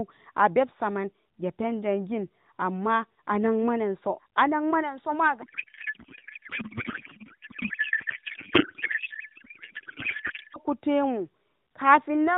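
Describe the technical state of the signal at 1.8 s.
At 1.8 s the speech is intact, with no dropout, click or distortion at that moment, only the narrowband sound of the mobile codec path carrying it.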